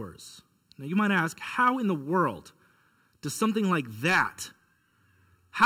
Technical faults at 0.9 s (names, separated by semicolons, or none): channel delay (comb filtering)